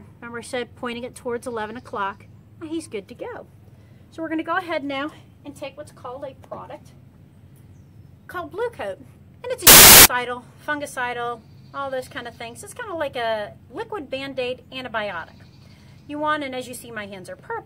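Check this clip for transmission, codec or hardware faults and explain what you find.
One fault: from 9.67 to 10.05 s, samples built from the wrong bytes. The reader misassembled each sample's bytes, promoting the rapidly changing low bits, so that stretch becomes loud, harsh broadband noise.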